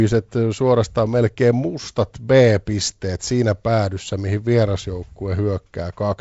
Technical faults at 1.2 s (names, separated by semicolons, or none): none